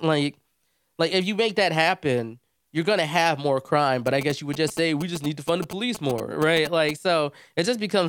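From 4.07 to 6.91 s, GSM signalling bursts from a nearby phone are rectified into the audio: a galloping, fairly loud dit-dit-dit of short 217 Hz buzzes.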